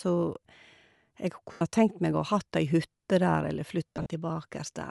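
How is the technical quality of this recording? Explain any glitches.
The recording has audible compression damage throughout and two short dropouts.

Likely Bluetooth LC3 compression, which fits about 48 kbps with 10 ms frames, thins the upper spectrum and fills it with noise, giving the speech a grainy, breathy edge.

Lost LE Audio frames, at 1.52 to 1.62 s for about 90 ms and at 3.95 to 4.06 s scattered over about 180 ms with runs up to roughly 40 ms, made the decoder repeat scrambled spectra, smearing the speech into noisy patches.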